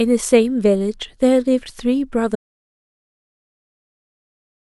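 At 2.36 s the speech cuts off mid-flow and the audio drops out to silence for the rest of the clip. There is no fade and no room tone left underneath, just silence. The likely cause is that the input signal was lost, through a disconnected source, a broken link or an accidental mute, while recording carried on writing silence. On a waveform the trace collapses to a flat line; a spectrogram shows an abrupt edge followed by solid black.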